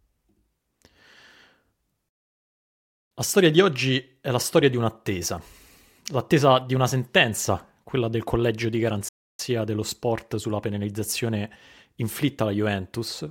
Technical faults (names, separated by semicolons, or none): playback stall